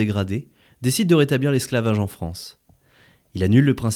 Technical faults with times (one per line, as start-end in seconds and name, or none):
none